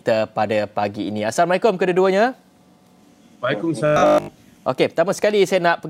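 From 3.86 to 4.38 s the sound goes hard and metallic, a rigid buzz locked at 50 Hz that only loosely tracks what's underneath. That's robotic sound from repeated short buffers. New audio is likely arriving too late, so the playback side keeps recycling the last 20 ms chunk to fill the gap. The 50 Hz pitch is just that 20 ms loop repeating. Most of that half-second is repeats, with the real material skipped.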